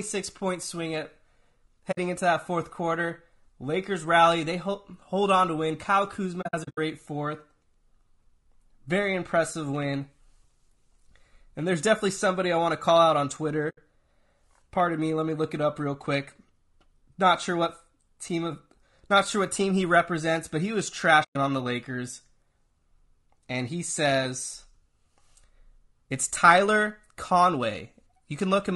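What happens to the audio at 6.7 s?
At 6.7 s the sound falls inside a burst of AAC frame loss with muting running from about 6.41 to 6.78 s. Roughly 220 ms of audio is missing, scattered across that 360 ms stretch in short gaps, the longest around 70 ms. This fits about eleven lost frames. The decoder zeroes the missing spectrum, and the overlapping windows fade each hole out and back in, so the gaps sound soft-edged. On a spectrogram they show as clean vertical blank bands with blurred edges. On the waveform the envelope tapers down to silence and back up.

Under this, the whole clip has the rough, grainy texture of low-delay AAC compression, likely AAC-ELD at 32 kbps. At this low bitrate, noise fills the gaps between harmonics and the top band sounds thin or synthetic. On a spectrogram the harmonic lines look smeared, with hazy energy between them and a patchy upper region.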